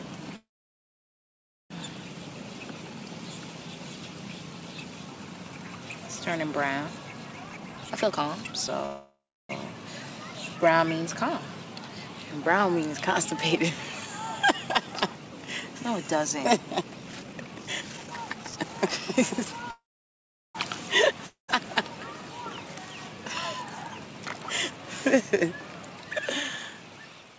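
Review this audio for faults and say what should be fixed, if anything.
Call audio freezes occur at 0.36–1.72 s, 8.86–9.51 s and 19.71–20.57 s. The last sound stretches into a fading buzz, then silence. This is likely a jitter buffer run empty. Audio resumes without loss.

Jitter buffer speed-up follows at 7.44–8.84 s (146%), 16.81–19.70 s (143%) and 27.34 s to the end (about double). Pitch-period slices are cut, so the sound hurries at unchanged pitch.

A long network dropout hits at 21.27–21.50 s. A brief fading fill gives way to silence. Roughly 0.22 s of audio is lost, likely because no packets arrived.

Stabilising the network path and giving the jitter buffer more headroom would prevent all three.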